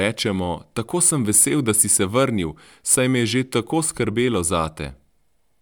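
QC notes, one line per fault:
No technical faults are audible anywhere in the speech signal, which holds steady level and continuous playback throughout.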